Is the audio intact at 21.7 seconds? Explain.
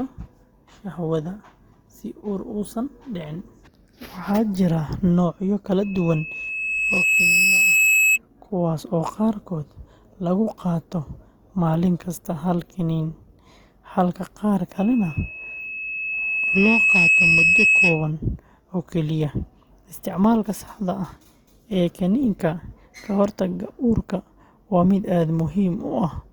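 No. At 21.7 seconds the speech carries the same damage heard through the whole clip, likely from Opus compression in its music (CELT) mode. The audio stays fullband, reaching about 20.2 kHz. But with too few bits, the encoder preserves each band's energy and fills in detail with folded copies of lower bands or noise. The voice turns grainy, rough and noisy, without the swirling holes of MP3. The roughness fits a rate near 24 kbps.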